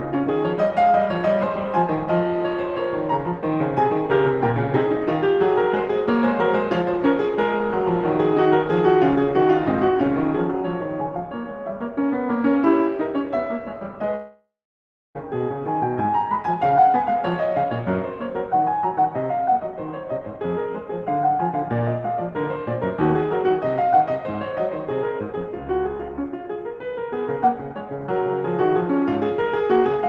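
This music clip likely lost about a second of incoming audio to a long network dropout from 14.15 to 15.17 s. The receiver briefly stretched the last sound into a fading buzz or hiss, then left roughly 0.65 s of near-silence before the music resumed, its top limited to about 12 kHz.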